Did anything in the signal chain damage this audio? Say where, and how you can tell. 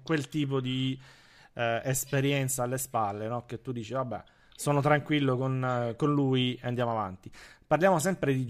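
No, nothing in the chain.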